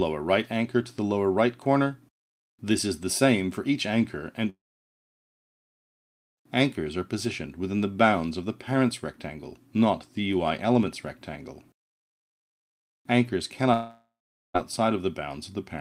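At 4.49 s the sound trails into a brief fading buzz, then about 1.8 s of silence until 6.39 s. At 13.73 s a fading hiss lasts roughly 0.4 s before silence, resuming at 14.56 s. Both gaps are likely a long network dropout, with the receiver padding missing audio that never returns.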